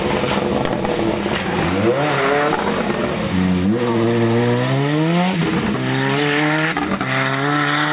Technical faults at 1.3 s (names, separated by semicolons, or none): none